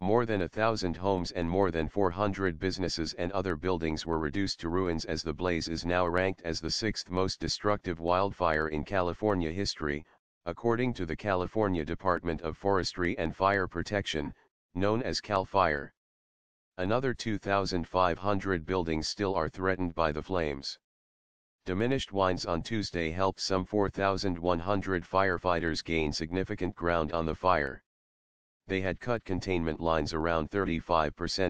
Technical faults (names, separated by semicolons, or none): video or display buzz